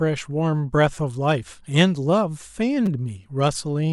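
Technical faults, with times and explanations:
0.95 s and 2.86 s, repeated buffer: a brief buzzy click as one 5.33 ms slice plays four times with hard joins. New audio arrived late, so the device replayed its last buffer, which fits a 256-sample buffer. Essentially nothing is skipped.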